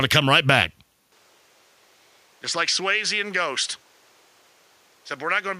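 At 1.12 s the input likely switched to a poorer device: the speech drops about 5 dB, narrows in band, and gains a faint noise floor with no gap.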